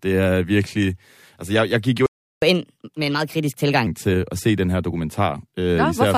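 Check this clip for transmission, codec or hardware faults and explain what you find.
Two related faults sit close together in this speech clip: a playback stall followed by a stretch of catch-up at higher speed.

Just after "jeg jeg gik jo", at 2.06 s, the speech cuts out into silence for about 0.36 s, until 2.42 s, and then resumes where it left off. This is a playback stall. The gap most likely comes from the player running dry of buffered data or having its output thread blocked. Nothing reaches the output until it recovers.

From 2.42 s to 3.87 s, the speech sounds hurried and noticeably higher, raised by roughly four semitones, before settling back to normal pitch ahead of "til at se den". This is catch-up at higher speed. The player resamples its backlog to run 1.25 times faster, recovering some of the time lost in the stall. Because resampling changes speed and pitch together, both rise for that stretch and then return to normal.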